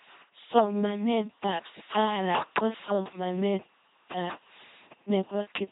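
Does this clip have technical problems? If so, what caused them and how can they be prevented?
Yes. An LPC-10 vocoder runs throughout the speech. Each frame is modelled by a short all-pole filter fed by either a buzzy pulse train or hiss, with no mixture, so the speech sounds mechanical and robotic, with buzz or noise where the voiced or unvoiced choice misfires. The damage is heavy, which fits a 2.4 kbit/s channel, and nothing is present above 3.9 kHz. To prevent this, use a modern wideband codec at a higher bitrate.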